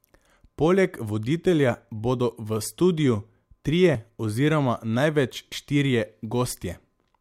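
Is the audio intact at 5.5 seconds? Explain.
No. At 5.52 s, just after "studiu trije oziroma največ", the speech jumps abruptly, and roughly 30 ms of audio is missing. There is no gap of silence; the sound on either side is butted together. This is most likely a dropped buffer (overrun): the recording software failed to read a block of samples before the hardware overwrote it, so that segment was lost and the stream skipped ahead.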